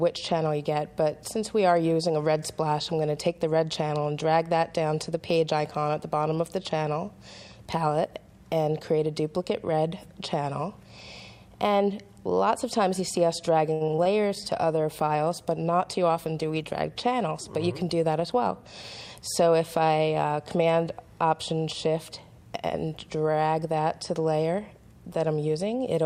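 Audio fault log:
13.73–14.07 s, repeated packet loss (robotic sound): the sound breaks up into a quick run of short holes, which fits about five lost or late packets. The longest is around 70 ms. Each hole gets patched by stretching out whatever came just before, so roughly a third of that stretch is made-up fill rather than real signal. That repeated copying is what gives it the choppy sound, with small pieces missing.
14.45–20.72 s, call bitrate drop: shortly after the dropouts the whole thing goes rough and dull. That points to the encoder being told to cut its bitrate hard, from somewhere around 128 kbps down to roughly 27 kbps. With that few bits it codes coarsely and trims off the top end, so you get that watery, muffled quality. It sits at its worst for about 2.3 s before it recovers.
15.80–16.25 s, jitter buffer speed-up: inside the low-bitrate stretch the audio briefly rushes, running about 13% fast with no change in pitch. 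That's the receiver's buffer holding more than it wants, likely after delayed packets showed up in a bunch. To claw back the delay it snips out tiny pitch-period-sized slices, roughly 70 ms in total. You hear that as a hurried, slightly compressed bit of timing.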